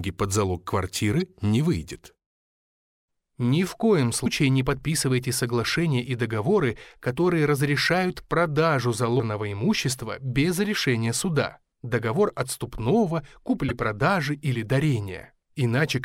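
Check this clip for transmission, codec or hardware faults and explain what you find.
The speech is marred by damaged data in a compressed stream, heard four times: at 1.20 s, then 4.22 to 4.26 s, 9.16 to 9.20 s and 13.69 to 13.71 s. Corrupted bytes make the decoder misread frames and lose sync while hunting for the next valid header. Each event is a brief chirp, squawk, click or short hole.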